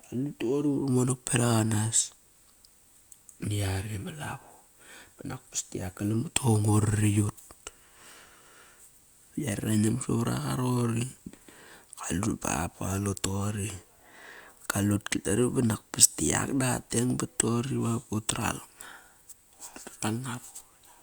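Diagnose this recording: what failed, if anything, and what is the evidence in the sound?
From 4.94 to 7.55 s, after "ma lavo", speech gains a hiss that vanishes in pauses: converter sample clock jitter, error roughly 30 dB down.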